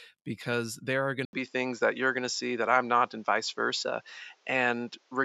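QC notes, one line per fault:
1.25 to 5.25 s, input switched to a poorer device: right after "because there are going" the recording most likely moves to a different, lower-grade microphone path. An 80 ms gap of silence marks the switch. From then on nothing reaches above 7.6 kHz, so the speech turns duller and boxier. The level shifts by roughly 5 dB, and a new background noise floor, around 40 dB under the speech, comes in with the new device's own tone.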